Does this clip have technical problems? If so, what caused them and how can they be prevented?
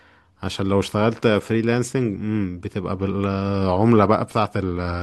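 No, nothing in this speech clip stood out as a technical problem on listening, so there is nothing here that calls for prevention.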